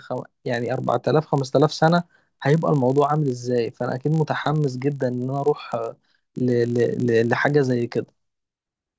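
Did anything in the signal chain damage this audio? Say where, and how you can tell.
Yes: the resampler restarted on every block, down from 48 kHz to 16 kHz, adds a 50 Hz buzz throughout at each 20 ms block edge. Unlike mains hum, it appears only with signal.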